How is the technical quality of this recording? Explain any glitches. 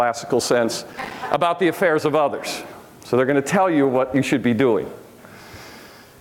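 There's one glitch. From 0.93 to 1.14 s there's processor overload crackle: around ten buffers of about 5 ms each missed their deadline and dropped to silence, leaving gritty tearing.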